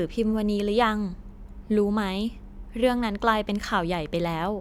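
No technical faults can be heard anywhere in the speech, and the signal keeps a continuous flow throughout.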